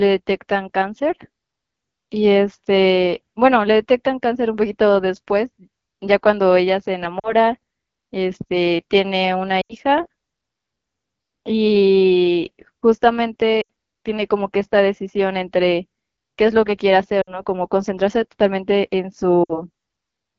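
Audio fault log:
throughout, AMR wideband (HD Voice) codec: The speech sounds rough and raspy, with a thin, hissy top end. The codec models the voice up to 6.4 kHz from a pulse-excited vocal tract filter and fills 6.4 to 7 kHz with shaped noise. The plainly audible damage points to one of the two lowest AMR-WB rates, around 8.85 kbit/s, where too few bits remain to code the excitation cleanly.
7.19–7.33 s, 9.61–9.74 s, 13.62–13.67 s, 17.21–17.40 s and 19.44–19.62 s, lost AMR speech frames: At each of these points the speech drops to near silence within two frames, then returns weak and rough for a moment. Radio errors corrupted a short run of frames, which fits roughly 40 to 80 ms of audio each time. The decoder repeated the last good pitch and vocal tract settings with falling gain, and that fade is quick in wideband.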